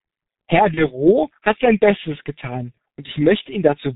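Muffled, hoarse speech with smeared consonants runs throughout, the heavy damage of the G.723.1 codec, whose narrow band and coarse coding fit a rate near 6.3 kbit/s. From 0.74 to 0.88 s, just before "hat sein", a brief, fading smear appears: VoIP packet loss concealed by the speech codec, bridging about 30 ms of missing audio, consistent with one lost frame.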